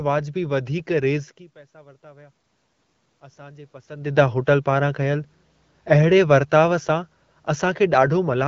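From 1.53 to 2.45 s there is automatic gain rising. After the talker moves back around 1 s and the input drops by about 24 dB, the gain control lifts level by about 4 dB. Voice and room noise swell together, visible as a gradual, uniform waveform envelope climb.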